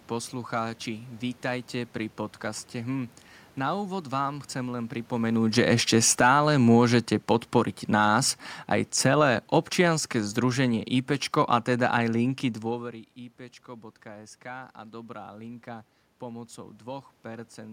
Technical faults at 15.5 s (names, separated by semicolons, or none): automatic gain rising